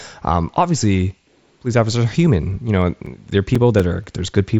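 A speech recording carried over a wideband Bluetooth headset link, with nothing above about 7.7 kHz, it suffers CD scratch ticks from 2.57 to 4.04 s, starting just after "obviously police officers are." A surface blemish wipes out more data per disc rotation than error correction can rebuild, so the player patches or mutes the lost samples, giving seven brief ticks, the longest only a few milliseconds, at roughly five per second.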